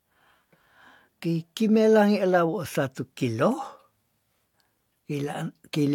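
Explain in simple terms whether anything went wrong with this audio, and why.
Something did go wrong, from start to finish. This is low-bitrate audio saved at a high bitrate. Nothing sounds above 18.5 kHz. The sound likely came from a small, heavily squeezed file, then was re-saved as a large MP3, which cannot restore what was lost.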